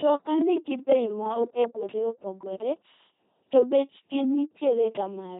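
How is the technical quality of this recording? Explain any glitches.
The technical quality is poor. LPC-10 vocoder damage runs throughout: speech is rebuilt from a ten-pole filter excited by buzz or noise, giving a heavily robotic, buzzy sound, consistent with 2.4 kbit/s, with nothing above 3.9 kHz.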